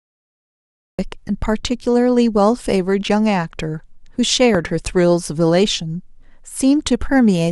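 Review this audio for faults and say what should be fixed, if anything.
The recording opens with a cut-off start: the first 0.99 s are digital silence, and at 0.99 s the speech appears mid-sound with no attack or fade. Capture evidently began after the talker had started, so the onset is sliced off. On a waveform this is a flat line that jumps straight to the speech's level; a spectrogram shows a blank region ending in a hard vertical edge. To prevent it, arm recording and leave pre-roll before anyone speaks.

A single loud pop lands from 4.55 to 4.57 s, a sharp thump sitting well above the speech, roughly 15 dB over it, while the talking continues underneath. A sudden voltage step, likely from a connector, switch or static discharge, was added to the signal, and the following stages shaped it into a brief pulse. The waveform shows a tall narrow spike; the spectrogram shows a thin broadband vertical stripe across all frequencies. 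To prevent it, secure cables and avoid switching or handling equipment while recording.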